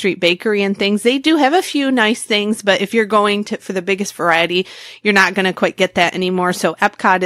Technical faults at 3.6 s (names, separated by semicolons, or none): none